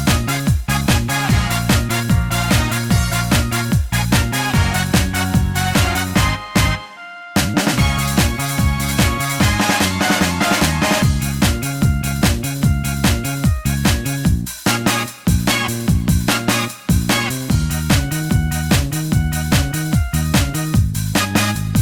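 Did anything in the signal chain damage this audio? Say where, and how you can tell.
No, nothing along the chain from capture to playback has left an audible mark on this audio. Every stage from input through storage to output sounds intact, with no point in the recording where the signal shows signs of having been damaged.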